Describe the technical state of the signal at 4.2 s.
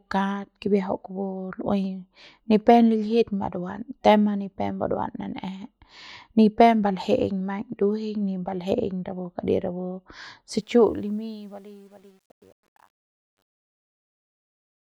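At 4.2 s the speech signal is intact, with no audible fault at that moment.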